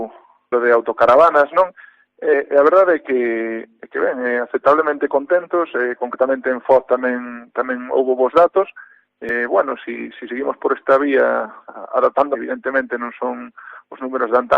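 At 9.29 s there's a quick blip from damaged data in the compressed stream: part of the data arrived wrong, so the decoder misread that frame, lost sync and hunted for the next valid header, leaving a short glitch lasting roughly 14 ms.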